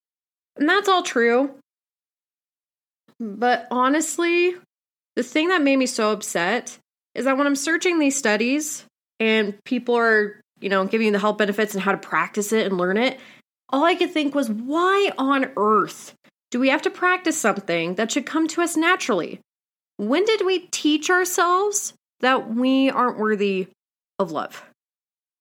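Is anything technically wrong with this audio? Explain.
No, nothing technically wrong can be heard here.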